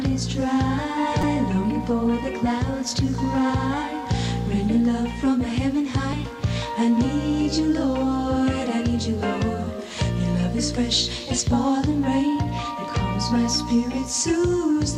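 At 1.20 to 1.24 s, and again briefly at 6.13 s, the clip has damaged data in a compressed stream. Part of the encoded stream was corrupted, so the decoder misread or dropped frames there and had to resync on the next valid frame header. Each event is heard as a momentary chirp, click or hole. On a spectrogram it appears as a narrow vertical disturbance or break, and on the waveform as a short discontinuity.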